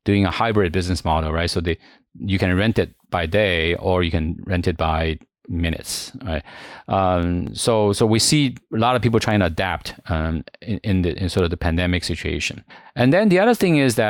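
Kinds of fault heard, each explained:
Word clock ticks: sharp ticks of uneven strength recur roughly every 0.7 s, about twenty from 0.30 s, just after "doing a", to 13.46 s. An unlocked receiver, off by around 30 ppm, drops or repeats one sample per slip. Their even spacing rules out random crackle.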